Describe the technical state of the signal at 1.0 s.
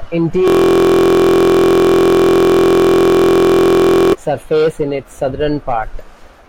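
At 1.0 s the signal is inside a system hang loop running from 0.48 to 4.13 s, ending just before "surface in its". The playback system froze while the audio hardware kept replaying one 23.22 ms stretch, which fits a 1024-sample buffer, 157 times. It sounds like a steady 43.1 Hz buzz. The waveform shows one identical segment tiled end to end, and the spectrogram shows frozen horizontal lines spaced at multiples of 43.1 Hz.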